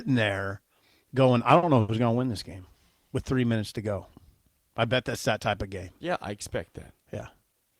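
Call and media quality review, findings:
Short stall from a late packet, 1.58–1.66 s and 1.81–1.92 s: jitter buffer ran dry, receiver extended the last sound about 50 ms after "there going I" and 80 ms before "going to win this". Nothing lost; held sound, slight buzz or dip, delay up accordingly.

Jitter buffer speed-up, 7.48–7.79 s: buffer over target, receiver cutting pitch-period chunks repeatedly, around 50 ms removed in total. Speech runs at 115% speed at unchanged pitch, sounding hurried at the end.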